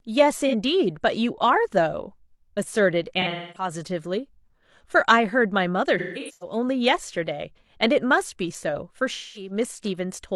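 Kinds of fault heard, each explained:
AAC frame loss with concealment: compressed audio frames went missing and the decoder patched the gaps from the last good spectrum, leaving smeared, phasey, noisy patches in the speech.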